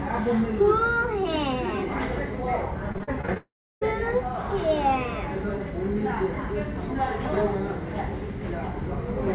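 A recording of everyday sound carried over a call link using what sounds like G.711 A-law at 64 kbps, with nothing above 4 kHz. From 2.92 to 3.37 s, repeated packet loss strikes six times, with gaps up to 38 ms. The receiver patches each gap by extending the previous sound, so this stretch turns choppy and robotic. From 3.37 to 3.83 s, a long network dropout is the likely cause of about 440 ms of missing audio. A brief fading continuation gives way to roughly a third of a second of silence before the sound resumes.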